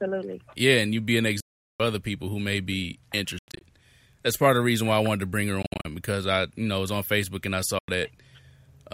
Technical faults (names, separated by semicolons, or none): Bluetooth dropout